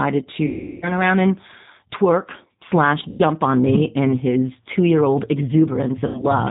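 From start to finish the speech runs through a G.729 codec, plainly audible here. The top end is gone above 4 kHz, and the voice has that slightly rough, synthetic grain you get when speech is rebuilt from a vocal-tract filter, a pitch predictor and a handful of pulses per 10 ms frame. It fits the 8 kbit/s G.729A flavour.

On top of that there's VoIP packet loss concealed by the speech codec, three times. The first runs from 0.46 to 0.93 s, just before "around and twerk slash", with about 360 ms of audio missing, which fits a string of 20 ms packets dropping. The decoder keeps extrapolating from its last pitch and filter, so the sound smears into a buzzy tone or coloured noise that fades as the gain drops frame by frame. The second, 3.09 to 3.24 s, between "around and twerk slash" and "on me in his", loses 100 ms and gives a shorter version of the same smear and fade. Near the end, 6.07 to 6.32 s, the losses are scattered: 120 ms gone across 240 ms, with the longest gap 80 ms. 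The voice stays weak or distorted after each gap while the decoder catches up.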